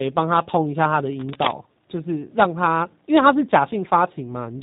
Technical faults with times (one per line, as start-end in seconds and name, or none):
0.00-4.63 tandem speech coding
1.15-1.51 cable scratch noise